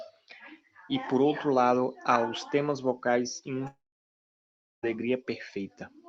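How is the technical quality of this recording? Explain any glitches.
The recording has one clear glitch, a gap of just over a second in the speech, heard through a call codec that trims content above 12 kHz.

Long network dropout, 3.67 to 4.85 s, right after "os temas vocais e": audio likely stopped arriving, so the receiver stretched the last sound into a brief fading buzz. About 1.07 s of near-silence follows, and speech resumes with that stretch missing.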